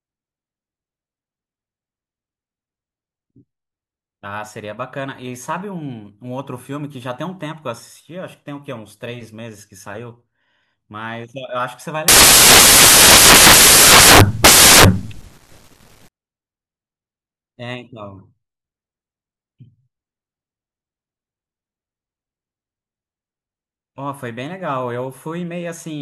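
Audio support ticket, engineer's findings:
Samples built from the wrong bytes, 12.08 to 16.08 s: loud, harsh broadband noise, close to white on the loud parts. Reader's assembling bytes out of order or off by one, so low bits end up dominating.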